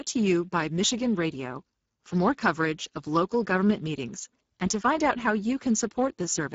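Across the whole speech clip you can plainly hear Speex codec damage. This CELP coder runs short of bits for the excitation, which makes the speech sound noisy and hoarse, consistent with a rate of around 10 kbps. Nothing comes through above 7.7 kHz.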